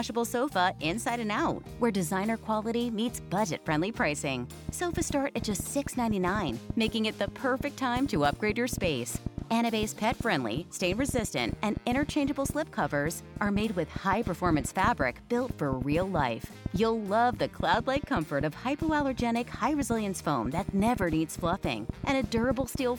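Something in the chain is likely injecting short pulses, such as electrical interference from nearby equipment or a faulty connection or power supply, producing a train of clicks from 4.69 s to 22.76 s. The pulses arrive at an uneven pace averaging about 6.4 per second, roughly a hundred in all, each much the same shape and peaking around 10 dB above the sound. They are heard as persistent irregular ticking and popping laid over the audio and exposed in its pauses.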